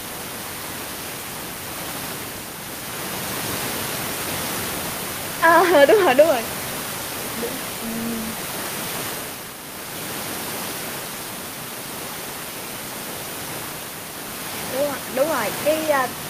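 No technical faults are audible.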